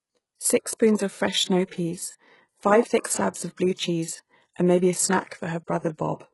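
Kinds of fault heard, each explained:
HE-AAC compression, throughout: heavy damage across the speech, with nothing above 11.5 kHz and s sounds gritty and metallic, likely from a codec that keeps only the lower spectrum and rebuilds the treble by copying lower bands upward, at a bitrate around 12 kbps.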